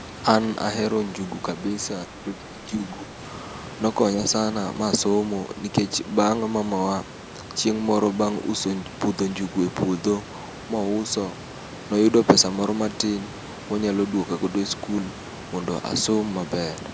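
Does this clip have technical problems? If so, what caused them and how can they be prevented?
Yes. Speech suppressed in double talk appears from 2.07 to 3.2 s, where the speech dips by roughly 10 dB, affecting about 0.7 s in total. The likely cause is an echo canceller that, with both sides talking at once, could not tell the near talker from the loudspeaker echo and attenuated everything together. Prevention: use a headset or better acoustic isolation, and an echo canceller with stronger double-talk detection.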